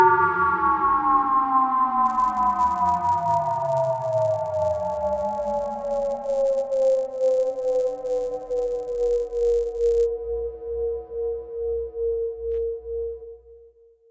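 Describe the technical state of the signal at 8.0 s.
A buzz at 100 Hz rides on the sound at 8.0 s, within the stretch from 2.06 to 10.06 s. The resampler restarted on every block, converting 48 kHz to 16 kHz in isolated 10 ms blocks, so each block edge carries a small error that repeats at that rate.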